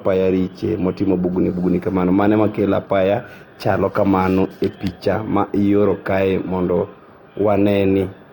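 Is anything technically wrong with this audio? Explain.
No, nothing in this speech recording stood out as a technical problem on listening.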